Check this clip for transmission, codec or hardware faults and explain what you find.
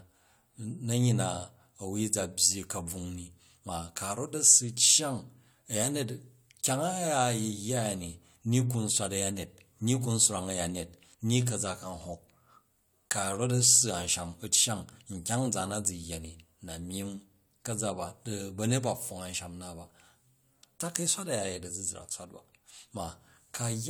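Listening through the clip, I find nothing that points to a fault. There is nothing to report.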